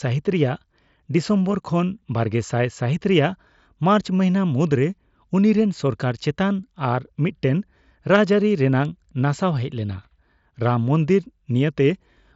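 No faults can be heard.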